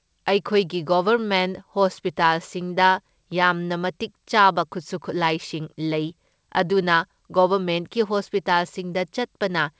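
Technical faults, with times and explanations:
No technical faults turn up anywhere in this speech clip. It has come through a call path with a wideband codec, and nothing is heard above 8 kHz, which fits G.722 coding.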